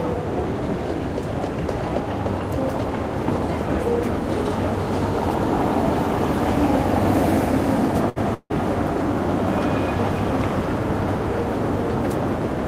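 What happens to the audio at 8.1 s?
From 8.09 to 8.18 s there is a short stall from a late packet: the jitter buffer ran dry, so the last sound was stretched for about 66 ms, then resumed where it left off, nothing lost. It sounds held with a slight buzz or dip, showing as frozen horizontal bands on a spectrogram and a repeating waveform.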